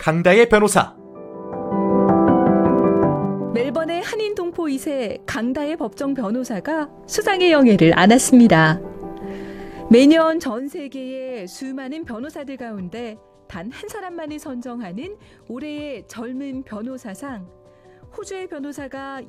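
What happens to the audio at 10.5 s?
At 10.5 s the level is falling with zipper noise, from 10.03 to 10.68 s. The roughly 20 dB cut lands in unsmoothed 3 dB steps, about ten a second, each making a small click. The result is a ticking that rides on the sound while the level moves.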